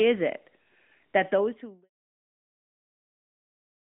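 No technical faults can be heard in the clip, so there are none to describe in time order.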